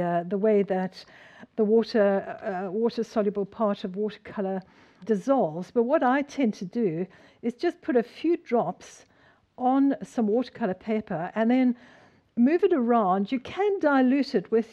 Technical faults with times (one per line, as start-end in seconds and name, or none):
none